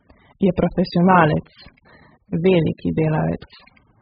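From start to finish the speech sounds dull and smeared, with nothing above 5 kHz and a warbly, fizzy edge on sibilants. That's likely AAC compression: heavy damage from an AAC-LC encoder starved of bits, which fits something around 8 kbps.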